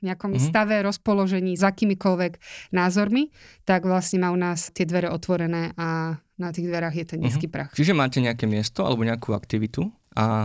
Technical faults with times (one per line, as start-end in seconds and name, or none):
none